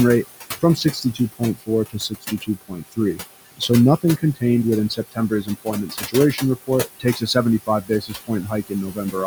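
Across the whole clip the background sinks between phrases and swells back under them. These are noise suppressor artifacts. The suppressor pulls bands it judges to be steady noise down by about 17 dB frame by frame, and the room noise, which sits about 12 dB below the speech, pumps as a result.

From 0.61 to 3.2 s, parts of the speech sound swallowed, with about a second of the speech turned down by up to about 21 dB. This is speech cut by the noise suppressor, which mistook quiet parts of the speech for noise and lowered them with the background. A shorter dip at 4.02 to 4.42 s, up to about 15 dB over a fraction of a second, thins a few sounds. From 4.89 to 9.15 s the same swallowing returns, reaching about 21 dB across roughly one and a half seconds in total.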